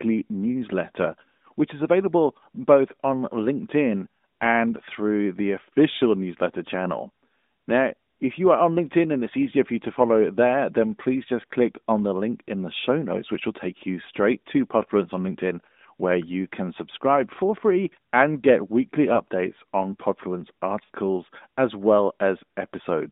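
A brief dip and warble at 19.14 to 19.20 s, then a longer smeared, drawn-out stretch that sags in level at 20.84 to 20.91 s. These are lost AMR speech frames. Radio errors made frames fail their checksum, so the narrowband AMR decoder filled each gap by repeating the last good pitch and vocal tract settings at falling gain. The first gap fits one 20 ms frame, and the second fits a run of about three, roughly 60 ms.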